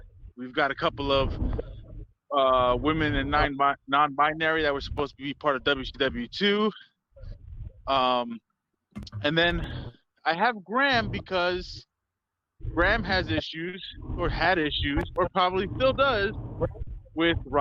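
The sender's clock runs about 3% slower than the receiver's, so there's steady clock drift between sender and receiver, and the buffer keeps draining throughout. From 0.49 to 12.7 s you hear repeated timing corrections: the receiver pads things out to stay in step, adding roughly a third of a second in small, unevenly spaced pieces. At 13.69 to 13.74 s there's a short stall from a late packet. The buffer ran dry, and the last sound gets held for 40 ms before carrying on, with nothing lost. More corrections follow from 14.6 to 16.2 s, adding only a little. Then another 40 ms stall hits at 16.83 to 16.88 s and sounds just like the first.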